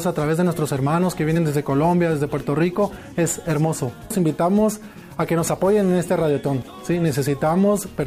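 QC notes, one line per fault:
6.62 s, damaged data in a compressed stream: a brief glitch as the decoder misreads a corrupted frame, loses sync and resumes at the next header.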